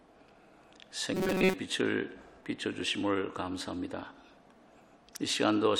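Between 1.14 and 1.54 s the sound goes robotic, a rigid metallic buzz at 188 Hz that only loosely follows the audio. It's likely from repeated short buffers: with input arriving too late, a roughly 5 ms chunk kept looping, covering most of that stretch.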